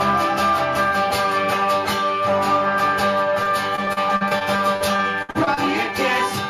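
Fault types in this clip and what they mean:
Repeated packet loss (robotic sound): From about 3.43 to 5.59 s, the stream keeps dropping chunks, roughly fifteen holes in quick succession, the longest around 61 ms. Each gap gets papered over by stretching the last bit of sound. That filler adds up to about 391 ms, around 18% of the stretch, with roughly 400 ms of real audio gone. So the sound turns choppy, stuttering along with pieces missing.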